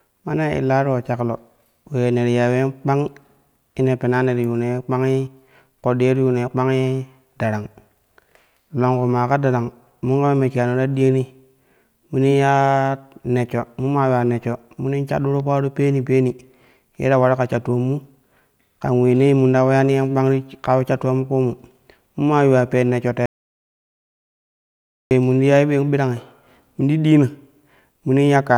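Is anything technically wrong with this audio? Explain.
Yes. An audio dropout to silence, likely a lost input, runs from 23.26 to 25.11 s: after "yuuwa pen neshsho", 1.85 s of silence without room tone, resuming at "num ti".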